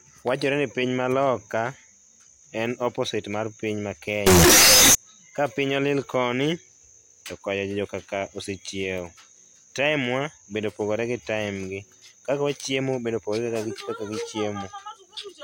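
From 4.27 to 4.95 s the speech turns into a loud, harsh, nearly square wave at an almost fixed, high level. This is float read as integer. The likely cause is 32-bit float samples read as 32-bit integers. Background noise rises to match the speech. Pitch stays audible.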